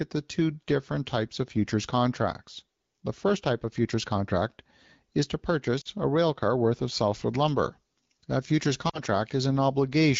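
At 5.81 s and 8.89 s, lost AMR speech frames: about 40 ms each (two frames' worth) was concealed by repeating the last good parameters with falling gain, so the wideband speech drops to near silence within two frames before the voice comes back weak or rough for a moment.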